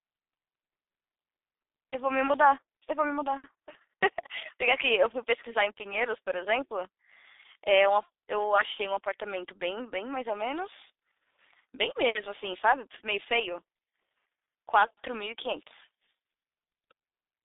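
A speech clip carrying heavy G.723.1 codec damage throughout. Nothing survives above 3.8 kHz, and the band runs 300 Hz to 3.7 kHz. Long coarse frames leave speech muffled and hoarse, fitting a 6.3 kbit/s mode.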